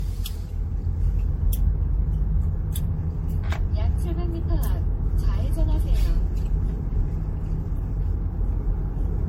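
Throughout the clip the sound is swirly, smeared and hollow, with blurred attacks and nothing above 16.5 kHz. This is generation loss, likely from around seven rounds of MP3 encoding at what sounds like 64 kbit/s, each pass adding fresh quantisation noise and spectral holes.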